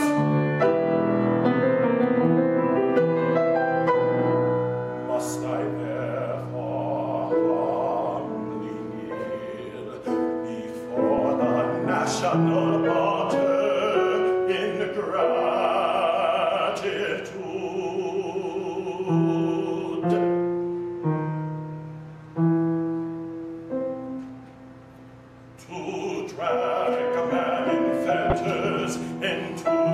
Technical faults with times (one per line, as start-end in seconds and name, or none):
28.30-28.33 corrupt frame decoded